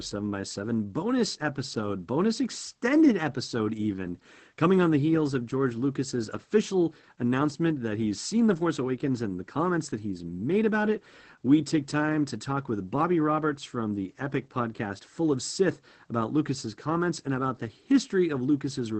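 From start to finish the speech sounds muffled and hoarse, with a faint robotic edge and nothing above 8.5 kHz. This is Opus voice compression in its SILK linear-prediction mode, coding the excitation coarsely at what fits a 12 kbps wideband setting.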